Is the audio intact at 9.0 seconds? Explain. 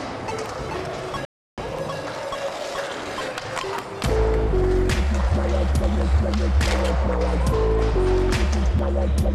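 Yes, at 9.0 seconds the audio is intact, with no dropout, click, distortion or other break in the signal at that point.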